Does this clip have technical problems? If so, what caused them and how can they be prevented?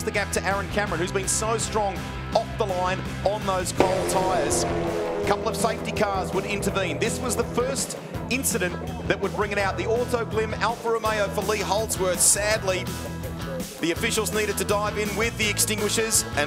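Yes. From 10.95 s to the end, pre-emphasis is left on: the CD-style 50/15 µs treble boost was never undone, so highs sit about 8 dB hot at 10 kHz, making it thin and bright. To prevent it, make sure de-emphasis is applied on playback or conversion whenever the source is flagged as emphasised.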